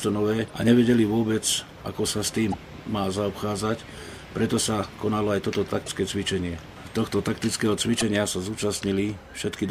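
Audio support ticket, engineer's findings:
Damaged data in a compressed stream, four short bursts: 0.46–0.50 s, 2.52–2.54 s, 5.84–5.89 s, 7.99–8.03 s, each 24 to 44 ms. Heard as brief chirps or blips. Probable component: decoder input/transport. Corrupt frame bytes force the decoder to misread frames, lose sync and hunt for the next frame header. Spectrogram: thin broadband vertical smears at those times. Waveform: abrupt discontinuities with a garbled burst between.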